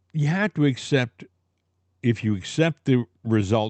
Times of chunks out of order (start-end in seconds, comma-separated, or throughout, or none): none